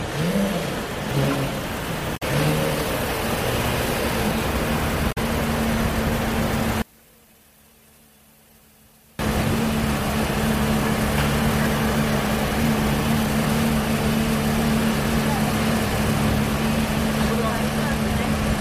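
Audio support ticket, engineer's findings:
Damaged data in a compressed stream: short glitches at 2.13–2.23 s and 5.08–5.18 s, each about 95 ms. Decoder loses frame sync on corrupt bytes and resyncs at the next header. On a spectrogram these show as broadband smears.

One channel inverted: from 6.82 to 9.19 s the mono fold-down drops by about 31 dB, leaving a faint residue. Likely reversed polarity on one channel cancelling the common content. Waveform shows a sharp amplitude collapse.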